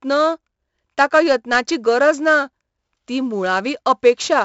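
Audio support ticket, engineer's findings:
4-bit ADPCM compression, throughout: heavy gritty hiss tracking speech level, smeared attacks where the step size lags, nothing above 7.7 kHz. Fits a 64 kbps stream.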